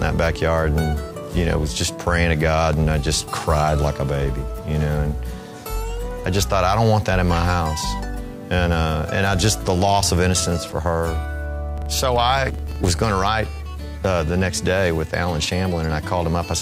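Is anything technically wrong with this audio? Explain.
Yes. From 11.78 to 13.32 s, a filter restarted on every block, beginning each block from silence. This produces ticks at 23.4 Hz, consistent with a 2048-sample block, visible as regularly spaced vertical lines on a spectrogram.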